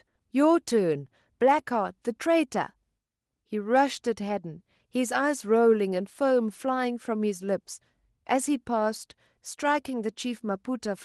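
No technical faults are audible.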